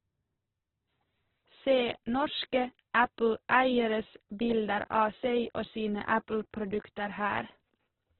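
A speech clip with heavy Opus compression from start to finish. The sound is grainy and rough throughout. Voiced parts turn noisy instead of clean. Nothing is heard above about 4.2 kHz, so the audio is narrowband and dull. This likely comes from Opus running in its music mode at a very low rate, near 8 kbps. Short of bits, the codec fills bands with noise, which causes the grain.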